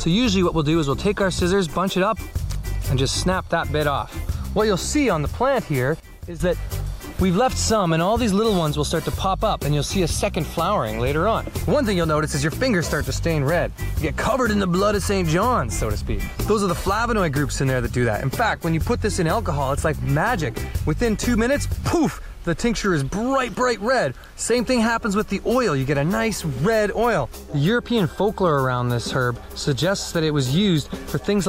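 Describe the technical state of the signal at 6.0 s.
At 6.0 s the level drops abruptly by about 12 dB and stays down until 6.4 s, when it returns. This is a sudden gain jump: the whole signal, sound and background noise alike, falls together from one sample to the next rather than fading, so the noise floor steps down in step with the content. The likely cause is a digital gain change or bit shift applied without any ramp.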